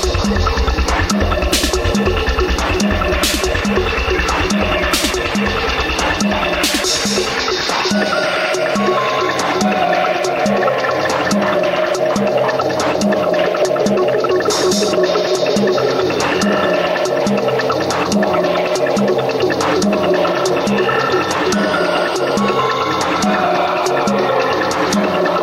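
Nothing is technically wrong with the audio in this clip.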